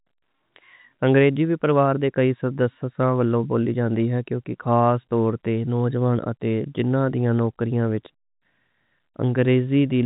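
Nothing in this speech recording registers as a technical fault. It has the sound of G.711 telephone coding, with nothing above 3.8 kHz and at most a faint grain that follows the level of the speech.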